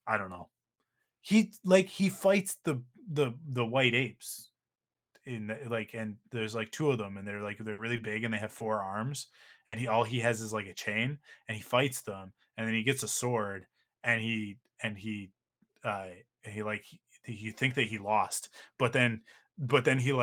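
A speech recording with network dropouts. A burst of packet loss at 7.72–7.80 s and 9.66–9.74 s leaves about 60 ms filled with a fading continuation, seen as smeared, decaying energy before the waveform resumes further on. Short concealed packet loss at 7.96–8.00 s and 8.58–8.62 s patches 20 ms gaps, leaving brief blurred vertical slivers and a waveform wobble.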